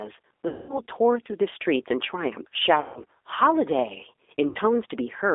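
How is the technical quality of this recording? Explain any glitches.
It's a fairly rough recording: the whole thing has that narrowband VoIP sound, and there are three spots where the line briefly breaks down.

Throughout, this is G.729 codec coloration. The sound is squeezed into roughly 300 Hz to 3.6 kHz, and the codec rebuilds speech from a filter, a pitch predictor and a few pulses per frame. That gives the plainly rough, slightly synthetic texture, which fits an 8 kbit/s G.729A link.

At 0.48 to 0.82 s, 2.81 to 3.03 s and 4.49 to 4.58 s you get VoIP packet loss concealed by the speech codec. The decoder smears its last pitch and filter forward with falling gain. The gaps run 210, 150 and 60 ms, which suggests 30 ms packets. They come out as buzzy or noisy, fading stretches, and the voice stays weak or distorted just after each one.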